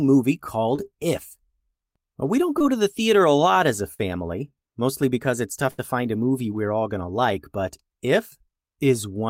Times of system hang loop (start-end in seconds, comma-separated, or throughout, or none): none